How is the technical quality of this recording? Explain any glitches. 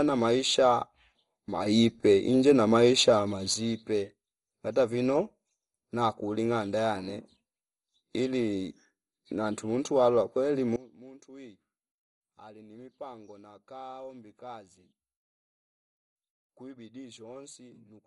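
The technical quality is poor: the speech is heavily coded throughout, and its level jumps abruptly twice.

MP2 compression, likely, runs through the whole clip. Nothing is present above 11.2 kHz, and the heavy damage, with dull tone, gurgling and a granular edge on the speech, fits a low rate around 56 kbps. Layer II divides the spectrum into 32 fixed sub-bands and, when starved of bits, shuts off the top bands and quantises the rest coarsely. Unlike a plain low-pass filter, this leaves flickering, grainy artefacts inside the remaining band, not just missing treble.

Two sudden gain jumps follow. From 1.66 to 3.54 s, the level steps up by about 6 dB and then drops back. From 10.76 s to the end, right after "ili nantu tumuntwa kweli", it falls by about 20 dB. The likely cause is a digital gain change applied from one sample to the next with no ramp. The speech and the background noise move together instantly, which separates this from a speaker turning away or a slow automatic gain control.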